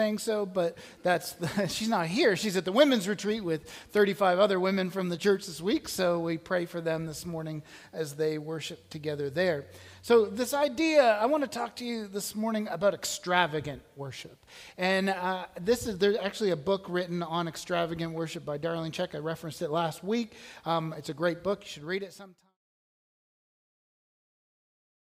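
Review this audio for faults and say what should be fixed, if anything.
Nothing to fix; the smooth fade-out from about 21 s down to silence at 22.58 s is an editor's taper with no hard edge.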